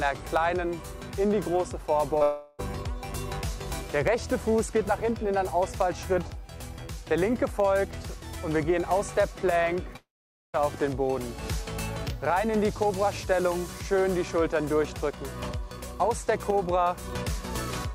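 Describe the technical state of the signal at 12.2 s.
At 12.2 s the signal is intact, with no dropout, clipping, glitch or other fault audible.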